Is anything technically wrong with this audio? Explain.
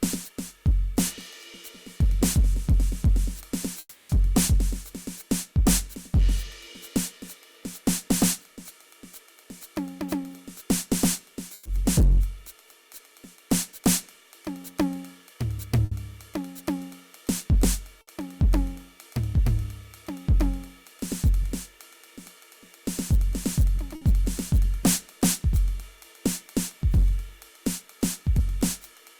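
Yes, there are three kinds of fault.

Hard clipping runs through the whole music clip. The signal overdrives a stage by about 13 dB, so a few percent of samples are cut flat at the ceiling. The flattened peaks add high harmonics, heard as harsh fuzz on loud passages.

A long network dropout is the likely cause of the gap from 3.79 to 4.12 s. The last sound is held for about 300 ms as a fading buzz or hiss, then about 40 ms of silence follows. The music resumes further on, with that stretch missing.

Bursts of packet loss occur at 11.53 to 11.68 s, 15.85 to 15.94 s, 18.01 to 18.10 s and 23.95 to 24.04 s. The receiver stretches the last sound over each gap, 120 ms for the first and 60 ms for the others, giving brief fills before the music skips ahead.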